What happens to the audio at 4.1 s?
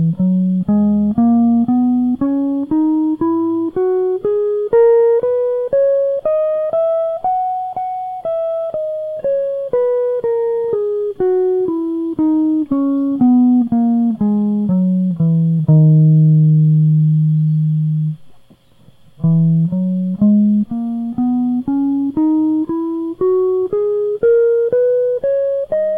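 Nothing goes wrong at 4.1 s: the music plays through that moment intact, with no dropout, click or other audible fault.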